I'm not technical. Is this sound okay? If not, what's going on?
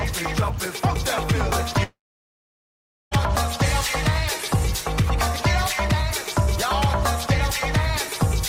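No. From 1.83 s to 3.14 s the sound cuts out for about 1.3 seconds, most likely because of a long network dropout. The last bit of sound trails off briefly as a fading buzz, and after roughly a tenth of a second there is nothing but silence for over a second. When the audio returns at 3.14 s, it does not pick up where it stopped. About 1.3 seconds of the original sound were lost and never played.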